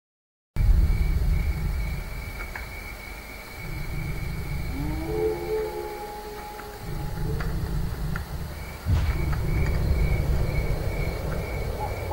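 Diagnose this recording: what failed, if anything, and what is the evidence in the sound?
The failure is a cut-off start at the recording or stream stage. The file holds digital silence from 0.0 to 0.57 s, and the sound then begins abruptly, mid-event, with no natural attack or fade-in. Capture evidently started late, after the sound was already underway.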